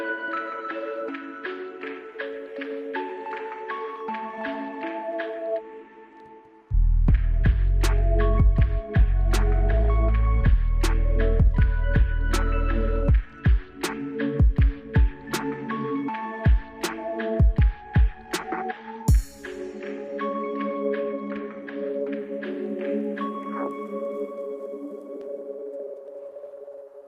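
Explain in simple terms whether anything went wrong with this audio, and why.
Nothing went wrong with this audio; there is no fault to explain.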